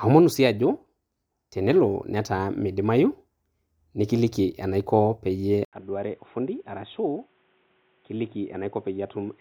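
At 5.65 s, right after "enaiko peiyie", an 80 ms gap precedes a dull, boxy, quieter sound with faint new background noise, likely an input switched to a poorer device. The spectrogram shows nothing above 3.8 kHz until the end. The waveform shows a brief flat gap, then smaller amplitude.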